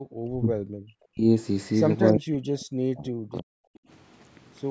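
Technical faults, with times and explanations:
0.28–1.25 s, speech suppressed in double talk: the voice sinks sharply for about a second, at its deepest roughly 40 dB down, instead of running on steadily. The likely cause is both ends talking at once: the echo canceller could not tell this talker apart from the loudspeaker echo and turned everything down together.
2.07–2.12 s, echo leak: a brief, faint scrap of delayed voice slips in, around 30 dB below the speech and trailing it by 352 ms. This is likely the far end's echo canceller letting some of its loudspeaker pickup through, so a late copy of the voice was sent back down the line.
2.12–3.55 s, speech suppressed in double talk: right after that scrap, the voice drops away again, about one and a half seconds in total, at worst roughly 40 dB down. The likely cause is overlapping talk again, with the canceller clamping down on the shared signal rather than removing only the echo.
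3.83–3.88 s, background gated by the echo canceller: the room sound ducks for a moment, about 23 dB lower for roughly 50 ms, and then returns. The canceller pushed the microphone down hard while the loudspeaker was active and released it as soon as it judged the echo gone.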